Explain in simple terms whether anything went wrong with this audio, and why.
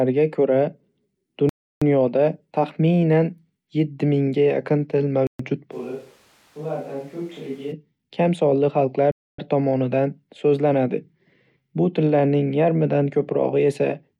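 A few things do go wrong here. The sound drops to dead silence three times: from 1.49 to 1.82 seconds (about a third of a second), from 5.27 to 5.40 seconds (a brief eighth of a second) and from 9.11 to 9.39 seconds (just over a quarter of a second). Each gap looks like a Bluetooth stall. Radio interference likely held up the wireless data, so the headphones ran out of audio and paused until the delayed packets arrived.

Right after the second gap, from 5.74 to 7.71 seconds, the speech suddenly turns hollow and roomy. It gets noticeably quieter and thinner in the low end, and more background noise creeps in. Then it snaps back just as abruptly. That sudden change is the signature of a switch to a distant microphone, with the recording likely falling back to a mic further from the speaker, such as a camera's built-in one, while the close mic was out.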